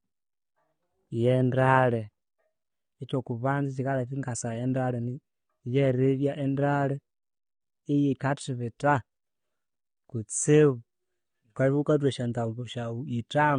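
Speech runs throughout with plainly audible damage of the kind AAC compression produces: the sound is dull and smeared, and sustained sounds and sibilants take on a warbling, fizzy texture. The likely cause is AAC-LC encoding at a low bitrate, consistent with about 32 kbps, which discards high bands and quantises the rest coarsely. On a spectrogram, energy stops abruptly at 9.7 kHz for the whole clip.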